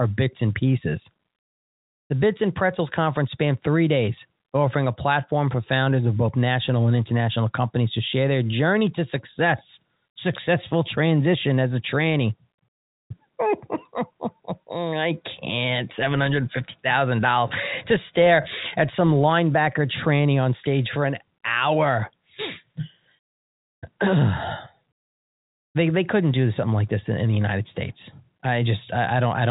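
No faults can be heard anywhere in the speech. It carries the narrow band of G.711 telephone coding, with nothing above about 3.8 kHz.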